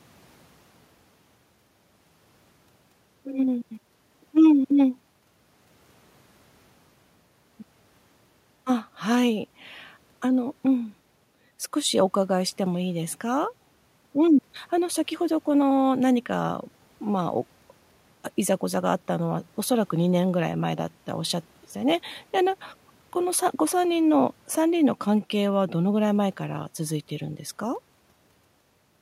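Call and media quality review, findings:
Nothing stood out on listening to this speech recording, and there is no finding to raise against any component in the call or media path.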